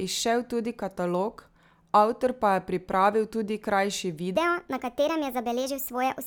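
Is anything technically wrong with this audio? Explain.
Yes, there's one problem. From about 4.37 s to the end of the clip, you've got a section at the wrong speed. That last stretch of speech runs at 1.39 times normal speed, so the pitch jumps up by around five semitones right along with the tempo. The voice turns chipmunk-ish and rushed all at once. It's most likely a playback or editing step running that segment against the wrong clock rate.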